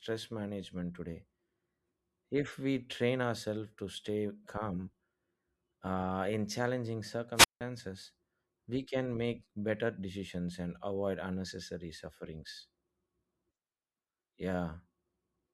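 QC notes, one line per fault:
7.34 to 7.61 s, wireless microphone squelch dropout: right after "uh in challenging" the speech breaks up. A short surge of hiss comes first. Then the sound cuts to near silence for about 170 ms before the speech returns. The radio link from the transmitter faded until the receiver's squelch gated its output. On a spectrogram, a brief broadband noise smear sits just before a blank vertical gap. In the waveform, the envelope collapses to a flat line and then recovers abruptly.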